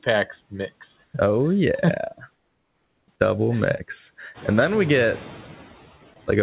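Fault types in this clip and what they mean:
Noise suppressor artifacts: Throughout the clip, the steady background is pushed down by about 13 dB, frame by frame. It dips in the gaps and swells back under the speech. On a spectrogram, the noise floor looks patchy and mottled, with isolated specks instead of an even haze, all below 4 kHz since the call path carries nothing higher.
Comfort noise in place of the background: In the pauses from 1.04 to 1.14 s and from 2.34 to 3.08 s, the real background gives way to a smooth, featureless hiss, likely generated at the receiver while the sender stopped transmitting. The first patch is about 1 dB louder than what surrounds it; the second is about 5 dB quieter. On a spectrogram, these stretches show a uniform, texture-free block, with an abrupt edge where the natural noise returns.
Noise suppressor catching up: Around 4.5 s the room noise jumps by about 12 dB, and from 4.34 to 5.4 s the suppressor lags behind it. 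The louder background first comes through with less reduction, then fades over roughly 1.06 s as the reduction settles at about 6 dB. On a waveform, the floor between syllables steps up and then tapers down. On a spectrogram, a bright band of noise appears and gradually dims.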